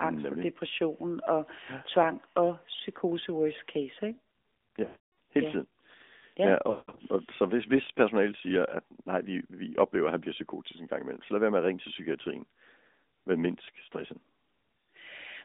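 The whole call runs through the AMR narrowband mobile codec. The band sits roughly between 200 Hz and 3.6 kHz, and the speech has that clearly buzzy, synthetic edge from the vocal-tract model working on few bits, which points to a mid-rate mode around 10 kbps.

At 4.86 s there's a burst of lost AMR speech frames through to 5.00 s. The decoder keeps replaying the last good pitch and filter settings at dropping gain, so the sound smears and fades out. From 6.70 to 7.02 s more frames drop out in scattered runs, the longest about 0.18 s, giving a stretched, warbly fade before the speech comes back rough.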